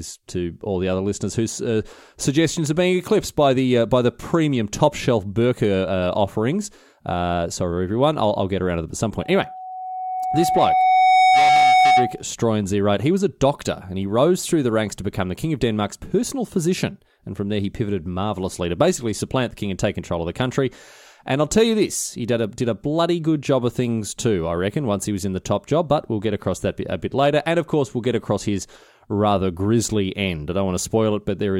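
Just after "to them at some", from 9.19 to 12.22 s, a loudspeaker feedback squeal builds as the microphone re-captures its own loudspeaker, swelling over about two seconds into a 746 Hz tone above the speech. A spectrogram shows one bright horizontal line; the waveform envelope grows steadily.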